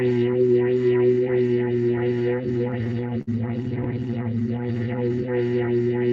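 A sound recording with two timing faults. From 1.91 to 3.29 s there are repeated stalls (stutter): eleven gaps, the longest 57 ms, where the jitter buffer ran dry and the receiver extended the last sound, adding 156 ms with nothing lost. From 3.94 to 5.17 s a jitter buffer slow-down repeats short stretches to rebuild its reserve, adding 110 ms so the audio runs at 92% speed without a pitch change.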